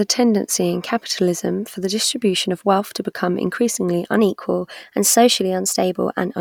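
A speech recording in which, from 4.19 s to 6.35 s, playback runs about 6.2% fast and pitch rises 104 cents, roughly a semitone, before snapping back. This is a drift correction step, likely from clock-matching software abruptly changing rate to rebalance its buffer.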